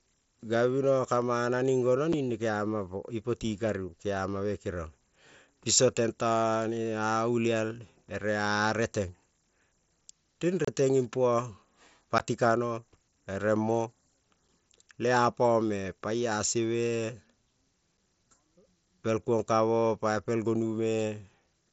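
Short, hard-edged dropouts punch holes in the speech at 2.13 s, 10.65 to 10.68 s, 12.18 s, 14.48 s and 17.97 s, each a tiny click or gap. The longest is about 30 ms. This is unconcealed Bluetooth headset packet loss: voice packets between headset and phone went missing and silence or an idle pattern filled their place, with no smoothing. Gaps of 7.5 ms fit single lost packets, and the longer ones fit two and four in a row. The wideband mSBC link itself adds only a faint graininess on louder syllables.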